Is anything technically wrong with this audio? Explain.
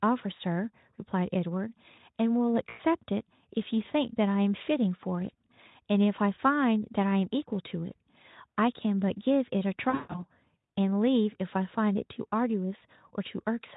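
Yes. At 2.69 to 2.80 s and 9.90 to 10.21 s the speech smears into a buzzy tone or a coloured noise that fades: VoIP packet loss concealed by the speech codec, extrapolating lost frames.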